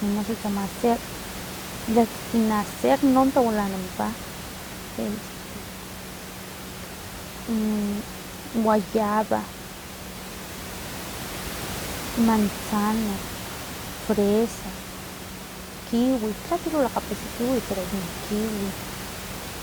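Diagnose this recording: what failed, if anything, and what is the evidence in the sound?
Nothing failed in this recording.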